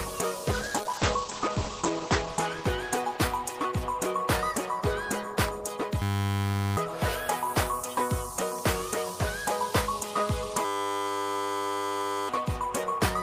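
From 0.52 to 3.23 s there's a call bitrate drop: the encoder falls from 32 to 11 kbps and bandwidth narrows from 20 kHz to 8 kHz, so the sound turns muffled and rough. Then come two system hang loops, at 6.02–6.77 s and 10.65–12.29 s. A 10 ms buffer repeats, giving a steady 100 Hz buzz that replaces roughly 0.7 s and 1.5 s of audio respectively.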